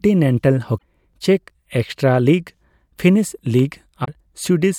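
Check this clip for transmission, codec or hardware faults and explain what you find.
Two short faults of one kind, damaged data in a compressed stream, interrupt this speech at 0.75 to 0.82 s and 4.01 to 4.08 s. Corrupted bytes make the decoder misread frames and hunt for the next header.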